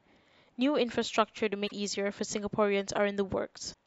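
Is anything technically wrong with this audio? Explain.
Yes. The speech has damaged data in a compressed stream at two points: 1.66 to 1.72 s and 3.70 to 3.75 s. Corrupted frames there make the decoder lose sync and hunt for the next frame header. Each spot comes out as a brief glitch, about 50 to 60 ms long.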